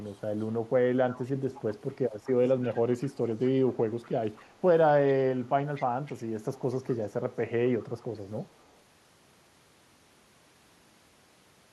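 A faint delayed copy of the speech, trailing by 241 ms, appears at 0.0–0.53, 0.96–4.55, 5.07–7.13 and 7.8–8.77 s: echo leak, likely from an incompletely cancelled loudspeaker pickup.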